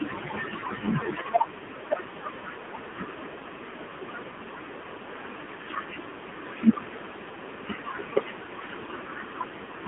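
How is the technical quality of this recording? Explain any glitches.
The quality is poor. It is heavily coded mobile-phone speech with one brief dropout.

AMR narrowband mobile codec, throughout: the sound is confined to 150 Hz to 3.6 kHz. Heavy coding leaves the voice buzzy and synthetic, which fits a low mode around 5.9 kbps.

Lost AMR speech frames, 7.88 to 7.91 s: the decoder repeats the last good settings at reduced gain. This gives a short dip or warble, which fits one lost 20 ms frame.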